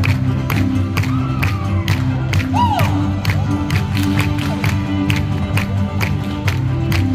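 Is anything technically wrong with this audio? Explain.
No, nothing technically wrong can be heard in this audio, and the signal comes through intact with no audible defects at any point.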